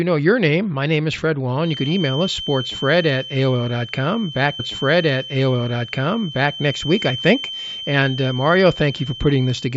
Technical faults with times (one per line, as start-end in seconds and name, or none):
1.56-9.77 feedback whistle
4.59-6.58 stream segment repeated